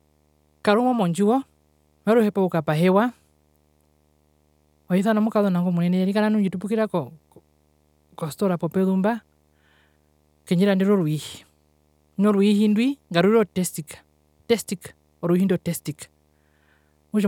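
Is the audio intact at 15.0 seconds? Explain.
No, a faint 75 Hz buzz with hash above it, roughly 45 dB below the speech, runs through 15.0 s: video or display buzz from a screen or video cable coupling in.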